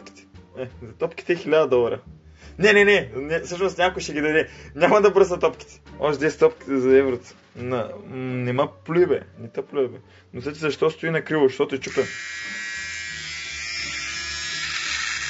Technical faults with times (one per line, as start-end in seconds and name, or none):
none